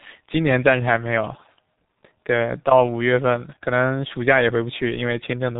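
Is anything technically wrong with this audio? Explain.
Yes. Throughout the speech, G.723.1 codec damage is heavy. Nothing above 3.8 kHz survives, and slow 30 ms frame modelling at what sounds like about 6 kbit/s leaves it muffled, hoarse and with smeared consonants, unlike plain low-pass filtering, which dulls without that rasp.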